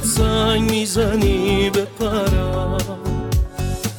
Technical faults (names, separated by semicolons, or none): none